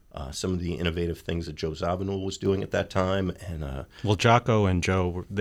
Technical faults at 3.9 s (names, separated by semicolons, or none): sudden gain jump